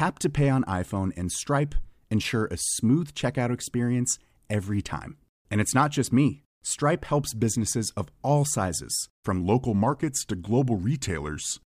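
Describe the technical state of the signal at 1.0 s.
At 1.0 s the speech signal is intact, with no audible dropout, distortion or other technical fault at that moment.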